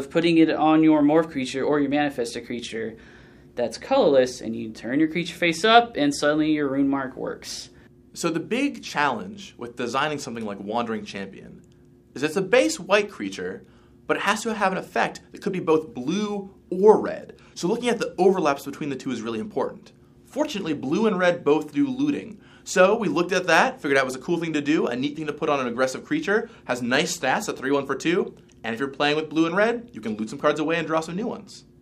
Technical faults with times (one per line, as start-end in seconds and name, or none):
none